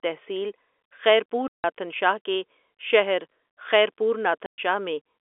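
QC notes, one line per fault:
1.48–1.64 s and 4.46–4.58 s, packet loss filled with silence: the telephone-band speech cuts out completely for 160 ms, then for 120 ms, with hard edges. Packets went missing and the receiver played silence instead; both gaps are multiples of 20 ms, which fits 20 ms packets.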